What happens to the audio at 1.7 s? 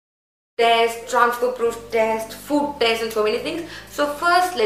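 At 1.7 s the audio plays on intact, with no dropout, click, level jump or other fault at that point.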